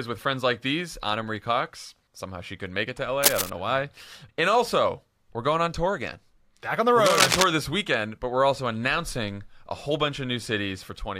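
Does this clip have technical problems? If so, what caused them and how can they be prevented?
Yes. Cable scratch noise occurs from 3.23 to 3.50 s and from 7.06 to 7.44 s. Dense, uneven rasping bursts cover the sound, first at about its level, then louder. The likely cause is a worn connector shifting and varying contact resistance. Replace worn leads and secure cables against movement.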